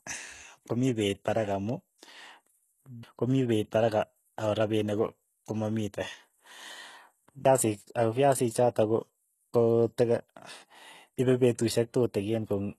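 HE-AAC compression, throughout the speech: nothing reaches above 12.3 kHz, and the treble sounds rebuilt rather than recorded. It is likely spectral band replication copying lower bands upward, which fits a very low bitrate near 16 kbps, so s sounds come out gritty and lispy.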